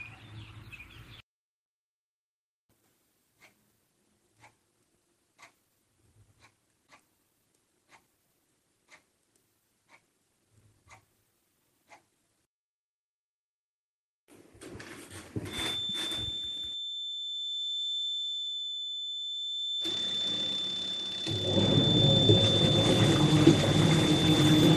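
At 1.15 to 1.18 s, a short stall from a late packet holds the sound for about 20 ms, then resumes without skipping anything, unlike a dropout, which leaves a gap. From 15.45 s to the end, a thin, steady 3.5 kHz feedback whistle sits a little below the sound and swells and fades slowly. It is likely a loudspeaker-to-microphone loop held just at the edge of feedback, not a constant electrical tone or a runaway howl.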